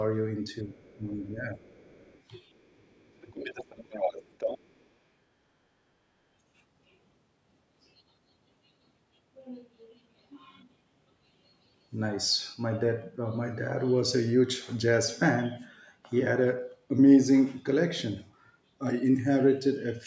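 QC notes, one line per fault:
0.63–0.74 s, speech suppressed in double talk: a brief dip of around 5 dB in the speech, likely the echo canceller turning everything down when both sides spoke at once.
0.77–0.96 s, other side's voice leaking through: a faint second voice, around 35 dB below the speech, likely far-end loudspeaker sound the echo canceller left in the microphone.
0.97–1.63 s, speech suppressed in double talk: the speech sags by up to about 10 dB over roughly half a second, likely from the canceller clamping down during overlapping talk.
1.64–2.21 s, other side's voice leaking through: a very quiet trace of the other talker, about 35 dB under the speech, likely residual loudspeaker echo that was not removed.
2.61–2.73 s, other side's voice leaking through: a barely audible scrap of the far voice, about 40 dB down, likely a short remnant of uncancelled echo.
2.74–3.54 s, speech suppressed in double talk: the deepest drop, about 20 dB, lasting about half a second, likely the canceller suppressing the talker while the far side was active.
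3.22–4.85 s, other side's voice leaking through: a clearly audible second voice only about 10 dB below the speech, likely strong loudspeaker echo the canceller failed to subtract.
3.72–3.88 s, speech suppressed in double talk: a short dip of about 10 dB, likely the canceller again ducking both sides during simultaneous talk.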